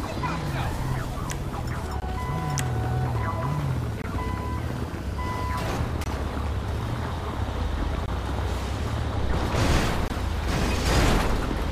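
The audio was delivered in 2-second chunks, and 20 ms of silence was left at each join, a gap between chunks. Because the sound itself is intact but pushed later at every boundary, the silences fall at 2.00–2.02, 4.02–4.04, 6.04–6.06, 8.06–8.08 and 10.08–10.10 s, each one shifting the next slightly. They are heard as brief dropouts that repeat with an even, mechanical rhythm.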